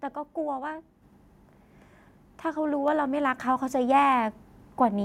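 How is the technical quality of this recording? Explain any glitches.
The recording has one glitch, a microphone volume stepped up at 1.02 s. The call software judged the input too quiet and raised the device's capture gain in a single jump rather than a gradual ramp, adding about 6 dB at once. Because the change happens at the microphone, the speech and the background noise behind it get louder together, so the level lurches upward mid-recording and stays at the new height.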